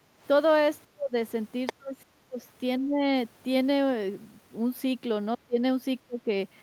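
At the very start, from 0.0 to 0.19 s, the echo canceller gates the background: with the loudspeaker active, it pulls the microphone down by about 8 dB. The room sound underneath the speech dips for roughly a fifth of a second, then comes back up as the canceller releases.

From 0.84 to 1.16 s the canceller likely misreads double talk, treating the talker's own speech as loudspeaker echo while the far side is also speaking, and suppresses both. The talker's speech sinks by something like 40 dB, almost vanishing for about a third of a second before it returns.

At 1.66 to 1.73 s the echo canceller likely fails to remove all of the far-end signal the device is playing out, so a short scrap of the other side's voice leaks through. It sits roughly 10 dB below the talker, a brief fragment.

The double-talk suppression then continues right after this leak, from 1.76 to 2.41 s. The talker's speech is cut by around 35 dB for about half a second. 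It happens again at 2.79 to 3.05 s with a shallower dip of about 20 dB. It happens twice more near the end, at 5.35 to 5.6 s and 6.03 to 6.28 s, each time a drop of about 30 dB lasting around a fifth of a second that briefly hollows out the talker's speech.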